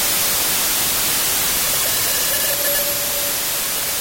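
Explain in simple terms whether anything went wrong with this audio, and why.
Wrong sample width, throughout: audio stored in 4-byte pieces was read as 3-byte pieces, so it plays as loud noise, slower and lower, at 0.75 speed.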